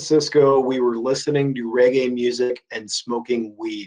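Two back-to-back short concealed packet losses, at 0.49 to 0.54 s and 0.54 to 0.57 s, each drop about 20 ms of speech that the receiver patches by extending the previous sound, leaving a brief smear.

At 2.43 to 2.52 s, a burst of packet loss removes about 60 ms. The receiver continues the last sound and fades it for about 65 ms, giving a held buzz or fading hiss before speech resumes with that stretch missing.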